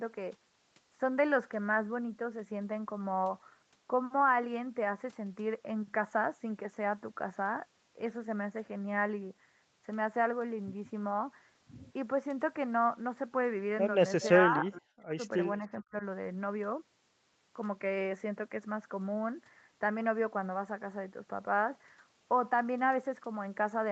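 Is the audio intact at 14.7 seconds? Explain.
No. From 14.49 to 15.18 s, speech is suppressed in double talk: with both sides talking, the echo canceller likely mistook the talker for loudspeaker echo and turned it down. For roughly half a second in total the sound dips and breaks up, falling by as much as about 40 dB.

Inside that span, from 14.72 to 14.8 s, there is an echo leak, likely from a loudspeaker echo the canceller failed to remove. A faint copy of the sound returns 417 ms late, about 25 dB below the main speech, as a brief scrap.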